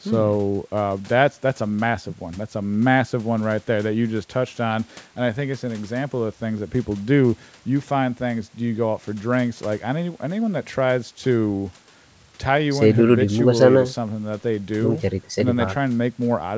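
No faults found; the speech stops at 8 kHz, consistent with a wideband G.722 call path and normal call microphone processing.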